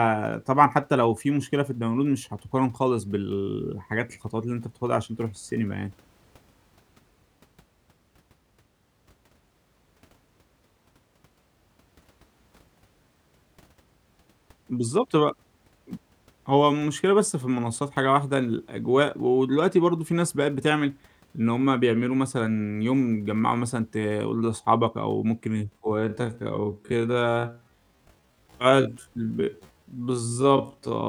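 From 25.45 s to the end at 31.09 s, the speech slows abruptly to half speed while its pitch stays put, so it drags. This time-stretched section is likely software lengthening the audio by repeating short fragments to preserve pitch.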